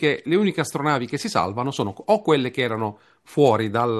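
Nothing goes wrong anywhere in this bit of speech, so there's no technical fault to point out.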